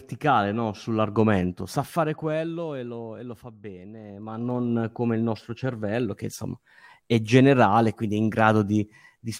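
Speech clip with zipper noise in two places. From 1.39 to 2.60 s, ending just before "e lo e lo", the level drops by roughly 15 dB in 1 dB steps at around twenty per second, and each unsmoothed jump leaves a small click, so a ticking rides on the speech. From 3.99 to 4.74 s, between "lo e lo fa" and "come il nostro cervello", the level climbs back about the same amount with the same stepped ticking.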